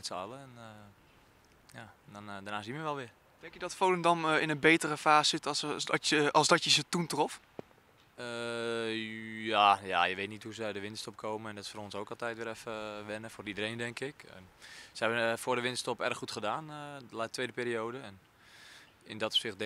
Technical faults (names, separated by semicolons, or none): none